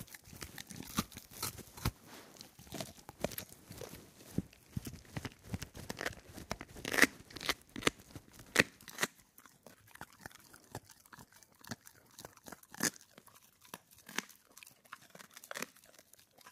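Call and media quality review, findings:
Processor overload crackle, 0.76–1.24 s and 5.77–5.99 s. Gritty tearing over the audio. Probable component: audio processing thread missing deadlines. Dozens of very short buffers, each under a millisecond, drop to silence. Hard-edged gaps fuse into crackle. Stops when load clears.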